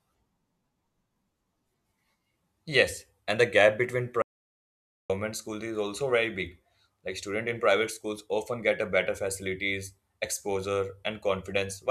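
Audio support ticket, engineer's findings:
Input path dropped out mid-recording, probably a disconnected device, failed link or stray mute, while the recorder kept writing silence. Audio dropout to silence at 4.22–5.10 s, about 0.88 s. Speech cuts off after "and the gap between", resumes at "schools is also very". Gap is silent, no room tone underneath, so whatever was spoken there is unrecoverable.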